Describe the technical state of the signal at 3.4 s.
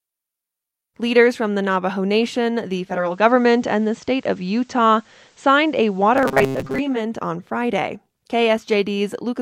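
At 3.4 s the receiver has lost its digital signal and sits in a digital radio blend to analogue, playing the FM broadcast from 2.82 to 7.12 s after a 0.47 s cross-fade. Level shifts about 2 dB, and faint hiss appears.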